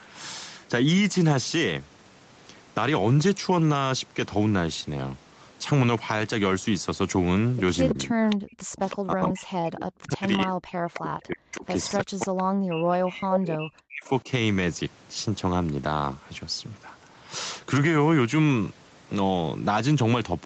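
Faint, delayed repeats of speech, mostly well below the main voice and sometimes nearly as loud, trail it by 324 ms at 7.89–8.36, 8.77–8.96, 10.94–11.00, 11.58–11.93, 12.37–12.43, 13.34–13.40 and 14.05–14.09 s, an echo leak where the far end's echo canceller likely let loudspeaker pickup return. From 7.93 to 14.28 s the speech repeatedly sinks, by as much as about 40 dB, for most of that span, speech suppressed in double talk as the canceller likely clamped both voices during overlap.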